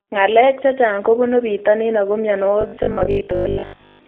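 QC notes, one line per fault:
Throughout: G.729 codec. The sound is confined to a narrow telephone band, about 300 Hz to 3.6 kHz, with nothing at all above 4 kHz. The speech is rebuilt from a vocal tract model and a few pulses per frame, not carried as a waveform. That makes it plainly rough and synthetic, with a thin, boxy tone. The damage fits an 8 kbit/s G.729A stream.
2.61 to 4.07 s: robotic sound from repeated short buffers. The speech turns into a rigid metallic buzz at 50 Hz that still loosely tracks the words. That pitch fits a 20 ms chunk of audio being replayed over and over. The likely cause is new audio arriving too slowly, so the player loops the last buffer while the real audio is skipped. Most of this stretch, roughly seven tenths, is repeated material.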